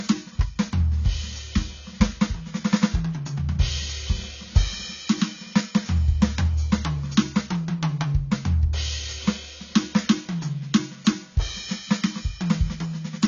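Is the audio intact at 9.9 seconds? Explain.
No. At 9.9 seconds, as across the whole music clip, this is low-bitrate audio saved at a high bitrate, likely a low-rate AAC encode re-saved as high-rate MP3. The music stops dead above about 7.3 kHz, leaving it dull.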